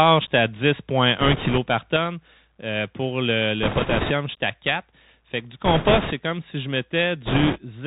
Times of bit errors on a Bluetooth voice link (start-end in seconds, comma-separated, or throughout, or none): 1.20-1.58, 3.63-4.12, 5.65-6.13, 7.26-7.58